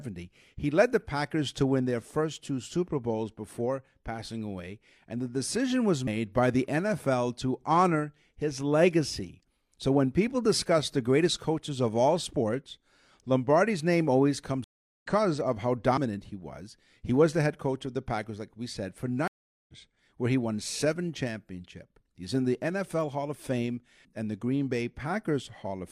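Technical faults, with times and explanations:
6.07 s and 15.97 s, audio missing between chunks: sharp jumps between "and the decision was" and "by the", then between "of how" and "he was", each skipping about a tenth of a second. There is no silence at the join, and the 10 s spacing likely points to 10-second processing chunks.
14.64–15.06 s and 19.28–19.74 s, stream reconnect: a real silence of 382 ms, then 409 ms between "like we said for" and "where he won seven". Each time the audio resumes later than where it stopped, by roughly 0.3 s and then 0.4 s, unlike the gapless chunk splices.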